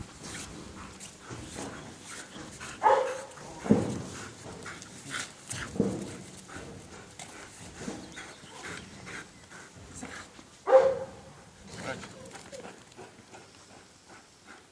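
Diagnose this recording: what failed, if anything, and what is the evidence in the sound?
Nothing in this recording stood out on listening as a failure at any stage of the chain.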